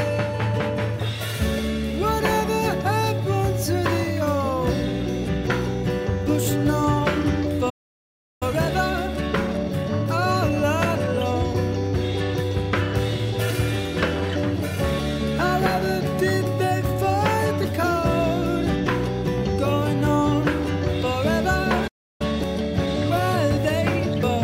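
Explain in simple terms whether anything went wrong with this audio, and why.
Two things went wrong, and each happens twice.

The first is a playback stall. At 7.69 s the sound suddenly stops and goes silent for about 0.71 s, until 8.43 s. At 21.87 s it stops again, this time for about 0.32 s, until 22.22 s. The likely cause is that the player ran short of data, or was briefly held up, and had nothing to play.

The second is a time-compressed catch-up. Right after each stall, the player rushes to make up lost ground. It trims tiny slices out of the audio and blends the gaps. From 8.43 s to 11.43 s, and again from 22.22 s to the end, the sound runs about 1.1 times faster. The pitch stays normal.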